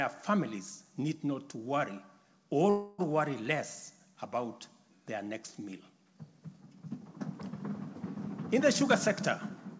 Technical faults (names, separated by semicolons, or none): call audio freeze; jitter buffer speed-up